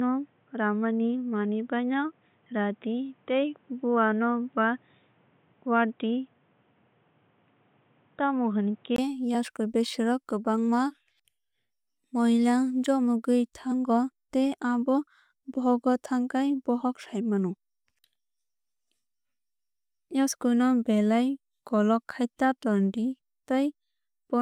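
Input switched to a poorer device, 0.0 to 8.98 s: the opening stretch of speech sounds dull and boxy, with nothing above 3.8 kHz. The likely cause is a lower-grade microphone or a headset's call profile, which passes only a narrow band and adds its own faint background noise, roughly 40 dB below the speech. At 8.98 s a 20 ms gap marks the switch back, and the sound opens up just before "yasku besero kwbangma", with no noticeable change in level.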